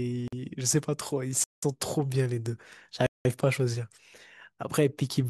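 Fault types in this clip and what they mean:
Block of digital silence: the speech drops straight to silence with no fade and returns just as abruptly. That hard cut is what separates it from a dropout that is smoothed over or filled in by concealment. It occurs three times: a brief hole of 46 ms at 0.28 s, then two longer gaps of 186 ms at 1.44 s and 3.07 s. These lengths fit whole 2048- and 8192-sample buffers left unfilled.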